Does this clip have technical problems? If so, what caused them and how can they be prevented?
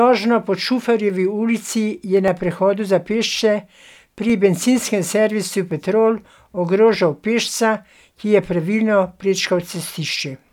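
Yes. Four single sharp clicks cut through the speech, at 1.10 s, at 2.28 s just before "na prehodu za", at 4.30 s just before "bencinskem servisu", and at 5.71 s just after "bencinskem servisu". Each is most likely dropped samples: a fraction of a millisecond of the stream goes missing, so the waveform leaps straight to a later value, and that discontinuity sounds like a click without taking away any audible sound. Keeping the capture and processing buffers from underrunning, for example with larger buffers or a lighter system load, prevents it.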